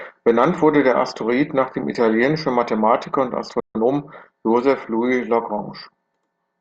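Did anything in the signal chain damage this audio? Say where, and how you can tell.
Yes. At 3.6 s the speech cuts to silence in mid-flow and stays silent until 3.75 s, a gap of about 150 ms, before carrying on. This is a playback stall, likely the player starving for data or its output thread being blocked.

From 3.75 to 3.89 s the speech sounds rushed, running at 2.0 times normal speed while keeping its pitch. This is time-compressed catch-up at the playback stage. The player drops and cross-fades small slices to clear the backlog left by the stall.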